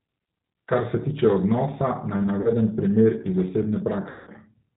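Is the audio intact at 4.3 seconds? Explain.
No. At 4.3 seconds the sound is still inside a VoIP packet loss concealed by the speech codec, running from about 4.10 to 4.32 s. Roughly 170 ms of packets never arrived, which fits seventeen or so 10 ms frames, so the decoder kept repeating its last pitch and vocal tract filter while lowering the gain. The speech smears into a buzzy tone or coloured noise that fades rather than dropping to silence. That continuation is what separates it from a plain dropout, and the weakened sound persists briefly after packets resume.

The G.729 codec is at work here too, as it is throughout the clip. It carries 8 kbit/s and rebuilds each 10 ms frame from a filter, a pitch predictor and a few pulses, with nothing above 4 kHz. Its damage is plainly audible as a dull, slightly rough, synthetic quality. Unlike the concealment, this coloration is constant, so the two can be told apart by whether the sound holds steady or suddenly stretches and fades.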